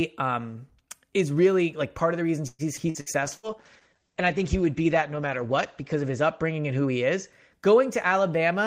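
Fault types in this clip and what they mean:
Repeated packet loss (robotic sound): from 2.47 to 3.48 s, just after "part of the reasons", four gaps of up to 115 ms are patched, making choppy speech with pieces missing from repeated lost packets.
Skip ahead: at 2.77 to 2.80 s the speech jumps forward, roughly 70 ms dropped and joined almost directly, as the buffer discarded audio to cut delay.
Call bitrate drop: from 3.25 to 7.39 s the speech turns rough and muffled as the encoder falls from 40 to 11 kbps, cutting bandwidth from 20 kHz to 8 kHz.
Jitter buffer slow-down: from 3.99 to 4.58 s speech drags at 93% speed with unchanged pitch, as repeated pitch periods add 52 ms to rebuild the buffer.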